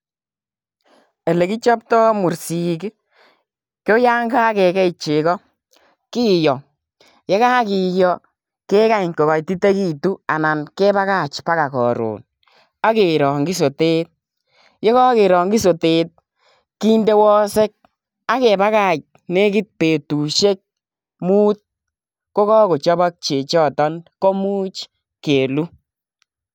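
No technical faults can be heard anywhere in this speech recording.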